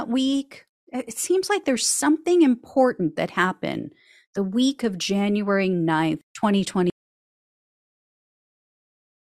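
At 6.9 s the speech cuts off abruptly and the audio drops out to silence, which lasts to the end of the clip. This is most likely an input that was lost through a disconnected device, a failed link or an accidental mute while the recorder kept writing silence. What sets this dropout apart from a natural pause or a fade-out is that there is no taper and no room tone or background hiss in the gap, just silence.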